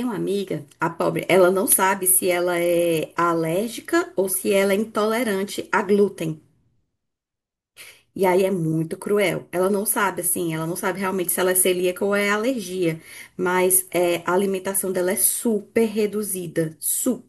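Listening closely to the speech recording, nothing stood out as a technical fault at any point.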